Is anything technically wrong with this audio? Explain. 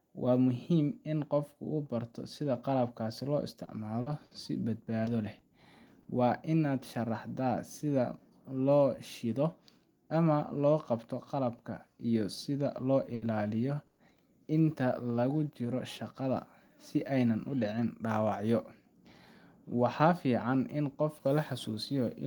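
Yes, three network-related problems show up in this speech clip.

From 3.65 to 6.07 s there's repeated packet loss with a robotic sound. Seven gaps, the longest 60 ms, get patched by stretching the last bit of audio, but 160 ms is simply gone, so it comes out choppy.

From 13.15 to 14.19 s there are repeated stalls, a stutter. Packets showed up late three times, the longest wait 110 ms, and the receiver held the last sound until data caught up. Nothing's missing, but it drags and stutters.

From 16.21 to 17.64 s there's a jitter buffer speed-up. The buffer had too much queued, so short pitch-period chunks, roughly 70 ms in total, were trimmed out. Speech runs about 5% fast at unchanged pitch and sounds a bit hurried.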